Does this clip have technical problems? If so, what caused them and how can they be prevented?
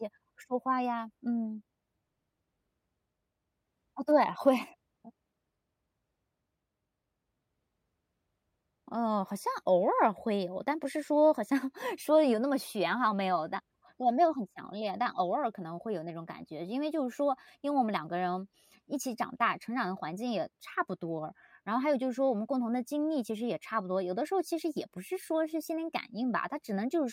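No, nothing stood out as a technical problem on listening, so there is nothing here to trace back or prevent.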